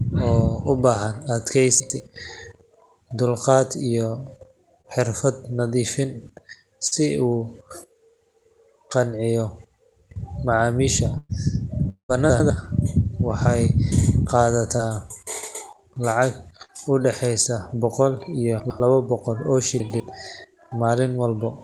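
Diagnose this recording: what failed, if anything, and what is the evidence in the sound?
Chunks out of order, at the driver or buffer stage: at 1.8–2.0, 12.3–12.5, 18.6–18.8 and 19.8–20.0 s, a 100 ms block of speech plays one slot late, giving a jumbled moment. Nothing is missing, which separates this from packet loss.

Short concealed packet loss, on the network with the receiver concealing it: brief smears or wobbles at 4.81–4.99 s (about 26 ms filled), 6.87–6.94 s (44 ms), 14.77–14.81 s (16 ms) and 16.65–16.70 s (38 ms). The decoder extends the last sound and blends back, so there is no reordering and no audible silence.

Burst of packet loss, network: at 11.18–11.31 s about 115 ms is filled with a held, fading continuation of the previous sound, followed by roughly 20 ms of silence. The speech then resumes further on with content missing. It is longer than the short concealments but shorter than a dropout.

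Long network dropout: from 11.89 to 12.11 s, a fill of about 200 ms decays and leaves about 100 ms of silence before the speech returns, skipped ahead. Concealment giving way to a longer silence points to a likely network outage rather than a burst. The Opus call path's 12 kHz bandwidth limit can be heard as a cutoff of the highest frequencies.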